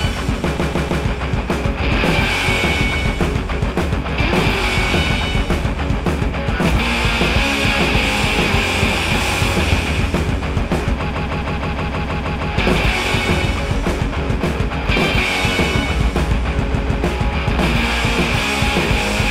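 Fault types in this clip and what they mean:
Repeated frames: the sound stutters in three places, each time looping one short slice of about 157 ms. That slice length fits a run of six compressed frames. The block was written out more than once, so the decoder plays it again. It repeats three extra times from 0.56 s, nine from 11.09 s and two from 16.71 s, which lengthens the audio by about 0.47 s, 1.41 s and 0.31 s.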